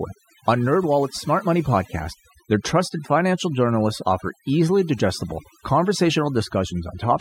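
Throughout the speech, the background drops to near silence flecked with twinkling specks: overdone noise removal, where an overly strong reducer switches off bands near its noise estimate.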